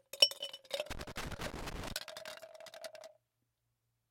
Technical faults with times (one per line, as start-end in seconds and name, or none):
0.91-1.92 loose connector crackle